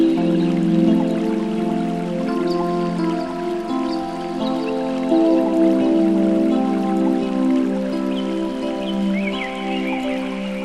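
No technical faults can be heard anywhere in the audio.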